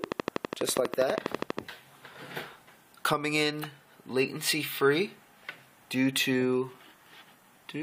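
From 0.04 to 1.6 s a train of clicks ticks over the sound at a steady 12.3 per second, about twenty pulses standing well above the audio, likely from interference or a faulty connection. Their even spacing and similar shape set them apart from random crackle.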